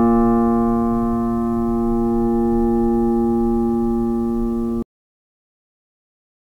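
This music clip has a cut-off end: at 4.83 s the sound halts mid-note and falls straight into digital silence with no natural decay, leaving the remaining stretch to 6.45 s empty. The final buffers were evidently never written or played back.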